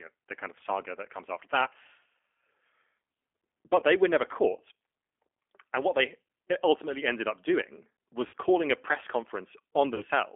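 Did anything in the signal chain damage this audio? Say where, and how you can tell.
Yes. At the codec stage, G.729 coding at 8 kbit/s rebuilds the speech from a filter, pitch predictor and pulses, which sounds plainly rough and synthetic. A spectrogram shows nothing above 3.4 kHz.

At the network stage, there was VoIP packet loss concealed by the speech codec at 1.64, 3.80, 8.27 and 9.95 s, covering 20, 20, 60 and 40 ms. The decoder extended its last pitch and filter with falling gain, so the waveform shows fading, smeared stretches.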